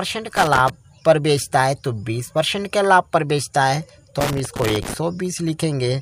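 Loose connector crackle appears from 0.37 to 0.70 s and again from 4.20 to 4.94 s: a worn or dirty contact keeps making and breaking as it shifts, chopping the signal into an irregular burst of scratchy crackle.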